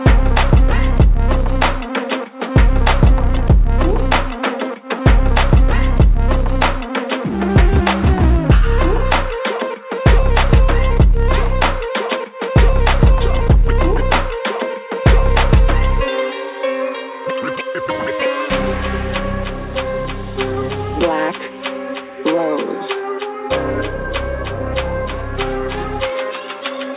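No technical faults can be heard anywhere in it.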